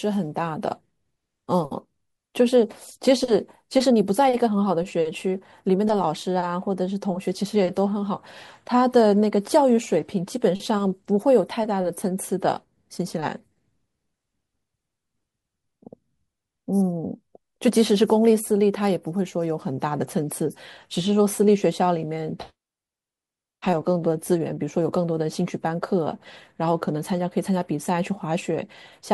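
No faults detected in the speech recording; nothing audible needs fixing.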